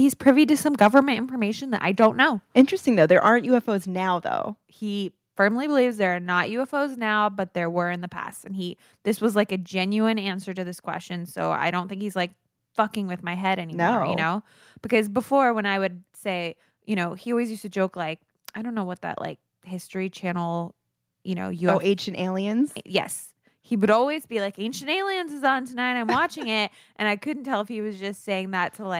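At 0.28 to 0.30 s, and again from 0.82 to 0.99 s after "to some", short bursts of harsh crackle mark microphone overload. The peaks run about 2 to 3 dB past the converter's limit and get flattened, likely from input volume set too high. At 1.02 s, just before "information that I", the microphone volume steps down by about 3 dB, so voice and background drop together in one clean step with no distortion. That step is what separates it from the crackling overload. Overload returns at 2.02 to 2.07 s and 2.59 to 2.61 s. Another step down follows, about 2 dB at 2.61 s, and a further one of about 3 dB comes at 3.60 s just before "now though", likely the call software cutting the input gain after the clipped peaks.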